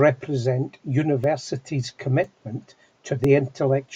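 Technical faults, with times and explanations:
1.24 to 3.24 s, periodic USB or driver dropouts: a blocked bus or driver silences a couple of milliseconds once a second, leaving about three regular ticks.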